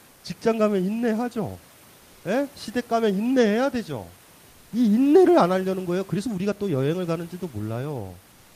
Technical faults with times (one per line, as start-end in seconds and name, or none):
0.09-0.23 comfort noise in place of the background